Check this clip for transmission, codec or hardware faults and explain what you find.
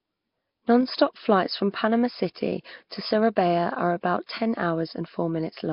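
There's one codec problem, and it runs the whole way through. The speech is band-limited with nothing above 5.3 kHz, and has a rough, hissy halo and a smeared, underwater character. That's likely Nellymoser compression, with heavy damage from starving bits at a rate pointing to about 22 kbps, so weak bands get noise-filled.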